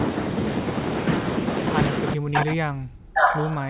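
From 2.14 s to the end of the clip, the echo canceller likely could not separate this talker from the far side's echo while both spoke, so it turned both down. This is speech suppressed in double talk: the voice sinks by up to around 40 dB.

At 2.34 to 2.51 s and again at 3.15 to 3.39 s, the loudspeaker end's canceller likely left part of its microphone pickup in place and sent it back. This echo leak arrives as a copy delayed by 541 ms, somewhat louder than the speech the first time and clearly louder the second, heard over the narrowband sound that stops at 4 kHz.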